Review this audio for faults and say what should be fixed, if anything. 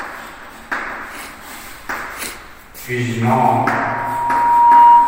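Loudspeaker feedback squeal begins at 3.56 s and continues to the end. A 949 Hz tone swells over about a second until it sits roughly 15 dB above the rest of the sound. The microphone is picking up its own loudspeaker, and at 949 Hz the loop gain exceeds one, so that frequency keeps reinforcing itself. On a spectrogram it appears as one bright horizontal line at 949 Hz that strengthens, and the waveform's envelope balloons outward from 3.56 s. To prevent it, lower the system gain, move the microphone away from or behind the loudspeaker, or notch out 949 Hz.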